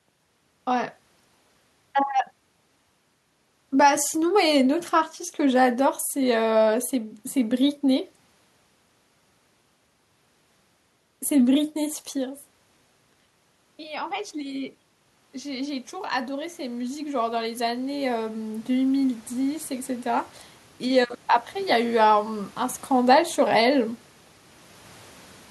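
A speech recording with automatic gain rising from 15.32 to 20.32 s. After the talker moves away around 12 s and the input falls about 15 dB, the control lifts gain about 11 dB. On the waveform this shows as a slow envelope swell, and on a spectrogram the room noise floor brightens along with the voice.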